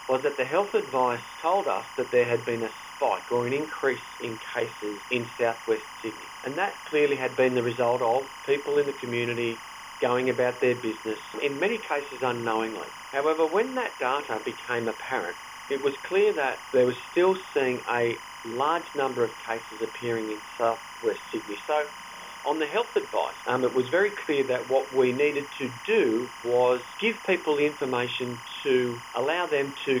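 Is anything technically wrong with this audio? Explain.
Yes. Timecode bleed runs through the whole clip: linear timecode from a neighbouring track or cable has leaked into the audio path. Its square wave flips between two pitches, near 1 and 2 kHz, and a repeating pattern of about 25 per second fits 25-frame code. It sits roughly 15 dB below the wanted sound as a steady chirping warble. A single-frequency whistle or hum would not have this constant two-pitch flutter locked to a frame rhythm.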